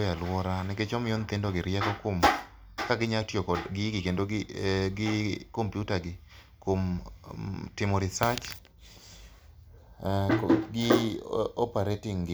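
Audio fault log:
No technical faults can be heard in this speech recording. There is nothing to log against any time in the clip.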